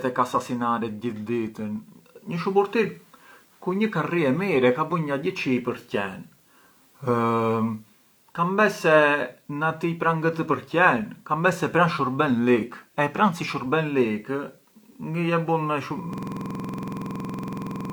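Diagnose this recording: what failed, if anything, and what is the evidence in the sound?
A system hang loop at the driver or buffer stage: from 16.13 s to the end of the speech, one 46.44 ms fragment repeats exactly, roughly forty times, as a rapid 21.5 Hz stutter-buzz. The host froze while the hardware kept replaying its ring buffer, which fits a 2048-sample buffer.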